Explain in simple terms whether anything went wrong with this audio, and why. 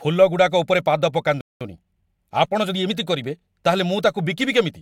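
At 1.41 s the speech just cuts out for about a fifth of a second, until 1.61 s, then carries on. That's a playback stall, most likely the player running out of data or getting held up, so nothing came out until it recovered.

Right after, from 1.61 s to 2.93 s, the speech sounds a bit rushed, about 1.15 times normal speed, but not higher-pitched. That's time-compressed catch-up: the player snips out tiny slices and blends the joins to make up lost time.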